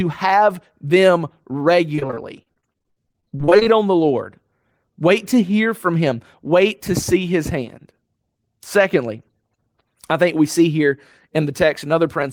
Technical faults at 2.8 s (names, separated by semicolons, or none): repeated packet loss (robotic sound)